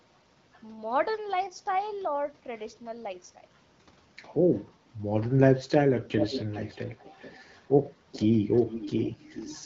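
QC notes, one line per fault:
6.16–6.76 s, 6.98–7.38 s, 8.12–8.19 s, 8.57–9.09 s, 9.3–9.55 s: echo leak. A delayed copy of the speech returns 433 ms late. It sits about 10 to 25 dB below the voice. Likely a far-end loudspeaker whose echo canceller let some sound back.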